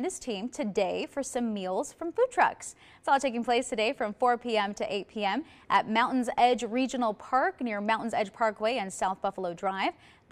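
Nothing is technically wrong with this clip.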